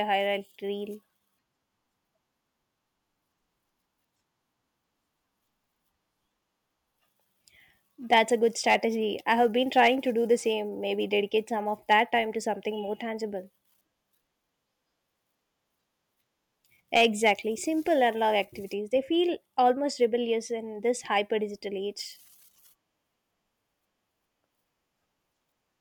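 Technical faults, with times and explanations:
8.13–8.19 s, 8.68–8.75 s, 9.78–9.88 s, 11.91–12.00 s, 16.94–17.32 s: hard clipping. Peaks overdriven by about 2 to 4 dB are cut flat, and the added high harmonics sound as brief crackle, first just before "a good".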